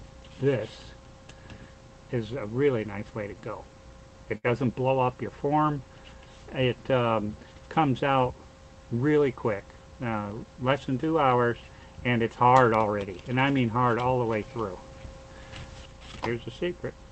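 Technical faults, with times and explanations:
4.37–4.46 s, burst of packet loss: packets arrived too late or not at all, so the receiver extended the last sound for about 65 ms while fading it down, then resumed with about 60 ms of audio skipped, heard as a brief smeared hold and a jump forward.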